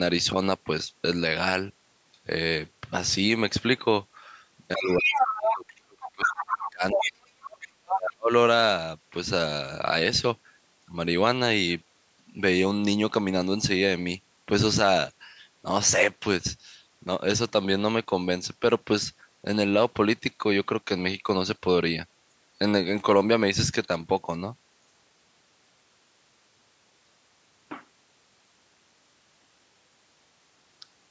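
From 4.76 to 7.61 s, the echo canceller likely failed to separate the talker from loudspeaker echo while both sides spoke at once. The result is speech suppressed in double talk: for about two seconds in total the talker's speech dips deeply, by around 40 dB at worst. Within that stretch, residual echo likely lets the other side's voice leak through at 4.86 to 5.74 s and 6.91 to 7.09 s at roughly the same level as the talker, and at 6.0 to 6.7 s slightly quieter. Further scraps follow at 7.61 to 7.68 s, faint, and at 7.86 to 7.99 s, again about as loud as the talker. The leaking voice itself is not turned down, and a second suppression from 7.92 to 8.31 s drops the talker deeply once more for about 0.4 s.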